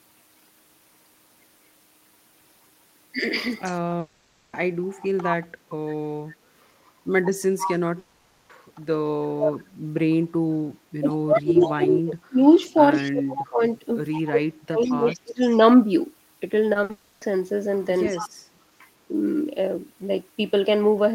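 At 3.64–3.80 s, the far end's echo canceller likely failed to remove its loudspeaker pickup, an echo leak that returns a faint copy of the speech about 146 ms late. At 3.99–4.55 s, a long network dropout likely cut the stream for about 0.54 s. The receiver bridged the gap with a fading held buzz and hiss, and the audio resumes with that stretch missing.

The same pattern repeats. An echo leak at 7.61–7.77 s is likely uncancelled loudspeaker pickup again, here a fairly strong delayed copy. At 7.99–8.51 s, another long network dropout likely lost about 0.5 s, which is smoothed over by a decaying buzz or hiss.

From 9.13 to 9.69 s, speech is suppressed in double talk. The canceller likely mistook overlapping talk for echo and pulled the speech down by around 35 dB. A very faint echo leak follows at 10.12–10.16 s, likely a brief gap in cancellation.

From 11.01 to 15.59 s, both problems run together. 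The canceller likely confused the two sides, so the speech dips by up to around 30 dB for about three seconds in total. Over 11.09–15.49 s, a 146 ms-delayed echo leaks through underneath.

At 16.73–16.77 s, short concealed packet loss drops 20 ms, heard as a small smear. A burst of packet loss at 16.83–16.91 s loses 60 ms and becomes a held buzz or fading hiss. This runs straight into a long network dropout at 16.91–17.23 s, likely losing about 0.3 s more, which is filled the same way.

A last echo leak at 18.07–18.29 s is likely uncancelled pickup again, and returns a delayed copy about 146 ms late.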